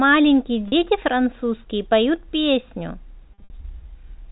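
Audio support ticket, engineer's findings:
Packet loss with pitch repetition, 0.68–0.72 s: brief buzzy held tone bridging a 40 ms gap, which fits two 20 ms packets. Receiver concealment repeats the last pitch period. Unlike a plain dropout, the gap is filled, not silent or clicked.

Same fault, 3.34–3.50 s: 120 ms lost across 160 ms, longest run 60 ms. Repeated pitch fades toward silence within that run, then cross-fades back. The decay and smooth re-entry separate it from hard muting. G.711 telephone path audible as the 4 kHz band limit.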